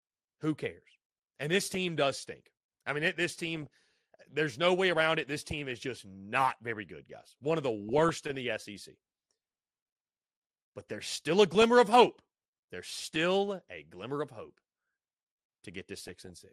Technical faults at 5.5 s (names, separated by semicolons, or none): MP2 compression; DAB burbling